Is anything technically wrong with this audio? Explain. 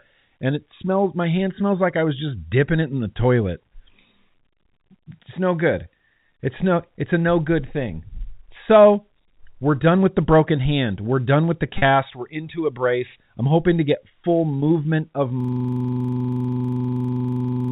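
Yes, there are two kinds of fault in this telephone-band speech.

Packet loss with pitch repetition hits at 11.78 to 11.82 s and again at 14.61 s. Roughly 40 ms and then 20 ms went missing (which fits two lost 20 ms packets, then one), and the receiver bridged each gap by replaying the last pitch period. You hear a brief held, slightly buzzy blip.

The system hang loop starts at 15.40 s and runs to the end. Something froze while the sound hardware kept cycling one 40 ms chunk of its buffer, so the same snippet repeats about 58 times at 25 Hz, a rough, steady buzzing stutter. The G.711 A-law coding keeps everything under 4 kHz, as expected on a phone line.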